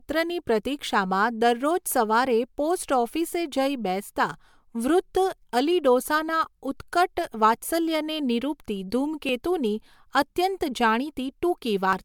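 Repeated MP3 encoding, likely about three passes, causes generation loss throughout. Requantising on shifting frame grids makes the speech swirly and hollow, with blurred attacks.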